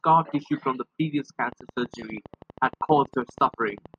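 From 1.52 s, right after "tissue from previous", a train of clicks runs to 3.95 s: about thirty near-identical pops at a steady 12.4 per second, peaking roughly as loud as the speech itself and ticking through the pauses as well. The likely source is electrical interference or a faulty connection or power supply injecting pulses. On a waveform they appear as evenly spaced sharp spikes; on a spectrogram, as thin vertical lines spanning the full frequency range at regular intervals.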